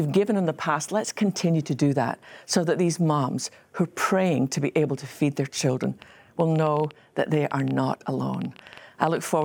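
From 5.84 s to 9.43 s a train of clicks ticks over the speech at about 8.4 per second, unevenly spaced. There are some thirty pops, roughly level with the voice, likely from interference or a faulty connection. Their matching shape sets them apart from random crackle.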